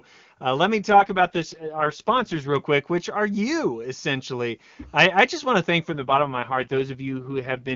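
From 0.90 s, right after "uh let me", until 2.56 s, just before "quick which are you", the speech turns rough, raspy and synthetic, with no gap and no loss of bandwidth. It happens again after "just want to thank", from 5.92 s to the end. This is an AMR rate drop. A weak radio link likely forced the wideband codec down, and the sound fits a step from 23.85 to 6.6 kbit/s, with the freed bits spent on error protection.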